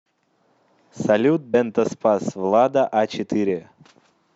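At 1.53 s the speech lurches forward, a case of compressed frames skipped. Roughly 50 ms of audio never plays because the decoder drops whole blocks, which fits about two frames of 26.1 ms each. Unlike a dropout, there is no silent gap; the audio simply jumps ahead.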